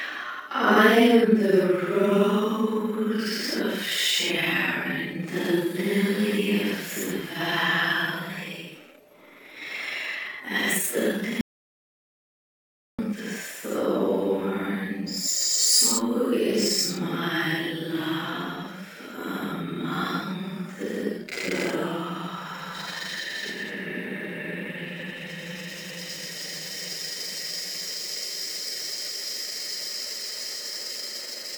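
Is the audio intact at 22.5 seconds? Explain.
Yes, the audio is intact at 22.5 seconds, with no dropout, click, distortion or other fault to be heard at that moment.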